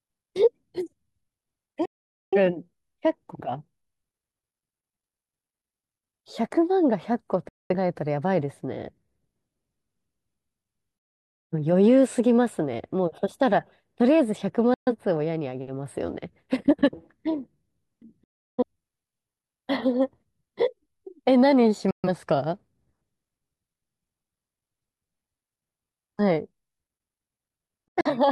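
Digital broadcast dropouts mute the speech at 1.85, 7.49, 10.98, 14.74, 18.24, 21.91 and 27.88 s, where corrupted frames were silenced. Each shows as an abrupt full-band blank gap in the spectrogram and a flat waveform.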